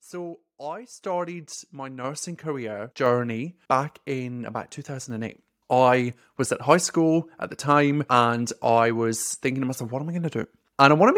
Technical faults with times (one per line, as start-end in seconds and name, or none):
1.02 microphone volume stepped up
2.04 microphone volume stepped up